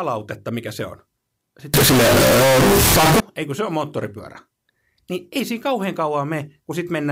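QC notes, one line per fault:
1.74–3.20 s, float read as integer: speech becomes a blaring, harsh buzz with background noise as loud as the voice, though pitch still tracks, ending before "ei kun se on"; likely 32-bit float read as 32-bit integer. The waveform shows near-square blocks at an almost fixed, high level, and the spectrogram shows dense broadband energy.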